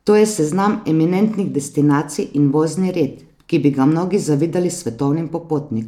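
A speech recording, and nothing is technically wrong with it.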